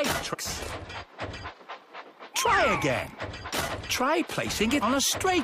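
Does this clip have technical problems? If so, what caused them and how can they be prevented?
Yes, there are two short bursts of damaged data in a compressed stream, at 0.33–0.35 s and at 4.81 s. Corrupted bytes there garble the frames, so the decoder loses sync and hunts for the next header, giving a brief blip. Checksummed transfers and avoiding mixed-in metadata prevent it.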